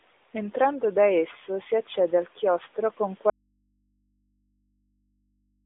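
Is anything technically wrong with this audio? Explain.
Yes. At 3.3 s, just after "accede al chiostro con", there is an audio dropout to a faint residue that runs to the end. The speech signal was likely lost upstream while the path stayed live, so the sound stops abruptly and only a low mains hum remains, roughly 50 dB below the speech.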